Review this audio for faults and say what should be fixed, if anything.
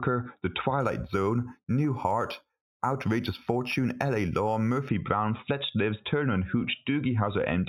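Imaging from linear upsampling runs from 0.80 to 4.89 s. The speech has a dulled top end and a faint metallic shimmer on sibilants, which fits 8 kHz material raised to 44.1 kHz by straight-line interpolation. Its weak filtering leaves mirrored images at 4 to 8 kHz, roughly 25 dB below the signal. To prevent it, resample with a proper band-limited filter that has a steep low-pass below the original 4 kHz Nyquist limit.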